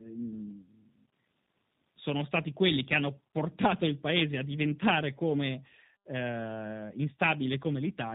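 Throughout, the speech suffers tandem speech coding. It is decoded and re-encoded at each link, passing through two speech codecs in a row, consistent with CVSD followed by G.729A. Each stage compounds earlier errors, leaving it rough, muffled and warbly, with nothing above 3.8 kHz.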